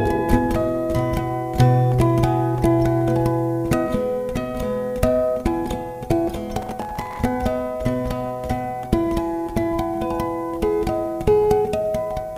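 From 6.62 to 7.24 s a burst of processor overload crackle rides on the sound: a gritty, tearing texture made of many tiny hard-edged fragments. The processor kept missing its buffer deadlines, and each miss replayed a scrap of old audio. The grain is very fine, which fits buffers of around 3 ms, with perhaps thirty misses across the stretch. Unlike a single dropout, it is a dense cluster of glitches that ends as the load eases.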